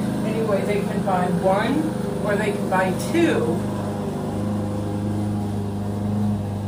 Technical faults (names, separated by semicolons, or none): none